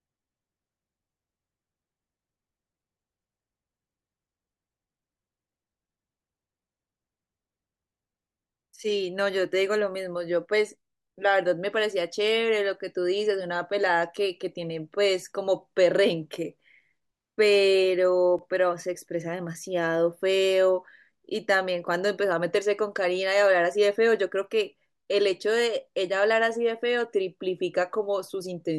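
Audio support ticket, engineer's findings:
Speech track, two block of digital silence events: 11.74 s, gap about 1.33 ms; 18.39 s, gap about 2.0 ms. Heard as sharp ticks, not holes. Hard cut to silence and back, no fade. Probable component: audio output callback missing its deadline, buffer left unfilled. The first gap fits a 64-sample block. Unlike a codec dropout or concealment, there is no smeared or repeated audio, only silence with abrupt edges.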